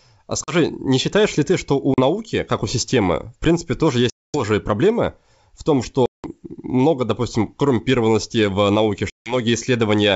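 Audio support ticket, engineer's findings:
Hard silent gaps at 0.44, 1.94, 4.10 (after "системы в принципе тоже"), 6.06 and 9.10 s, 40 to 240 ms long. Speech resumes briefly distorted and settles within tens of ms. Packet loss on an ADPCM call, over the 64 kbit/s G.722 link. Lost packets are filled with silence, leaving the decoder's predictor and step size out of step with the sender's.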